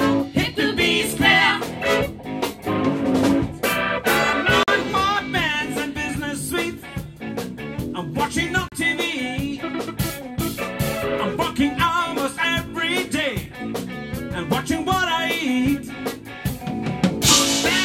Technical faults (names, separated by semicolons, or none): block of digital silence